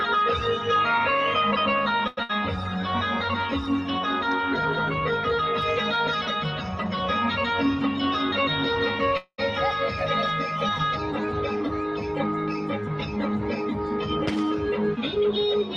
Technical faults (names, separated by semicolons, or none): short stall from a late packet; burst of packet loss; call audio freeze; jitter buffer speed-up